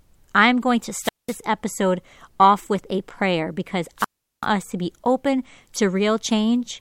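At 0.97 s, after "I'm going to", and 3.97 s, after "with a prayer because", wireless microphone squelch dropouts bring a hiss surge then muted holes of 0.2 s and 0.38 s, unlike clean digital gaps.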